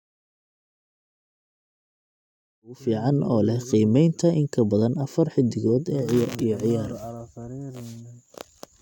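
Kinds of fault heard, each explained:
No technical faults can be heard in this speech.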